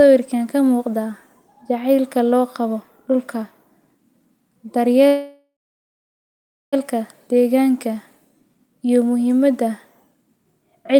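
At 5.07 s the speech halts in a call audio freeze lasting until 6.75 s. The last sound carries on as a brief fading buzz, then about 1.2 s of silence, and the speech resumes exactly where it stopped. The likely cause is delayed packets draining the jitter buffer. Unlike a dropout, nothing is lost. The 1.65 s gap is inserted, pushing everything after it later.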